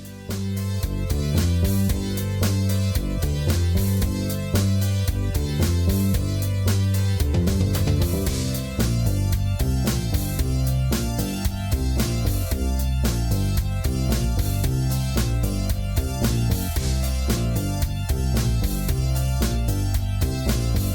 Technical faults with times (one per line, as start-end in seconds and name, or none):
none